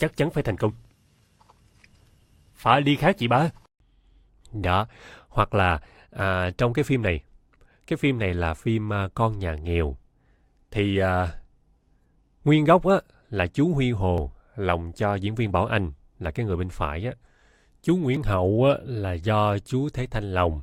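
Speech clip with two tiny skips at 14.18 and 18.17 s, an overlap between stream segments. The player trims a few milliseconds where 4-second segments meet, so the waveform jumps.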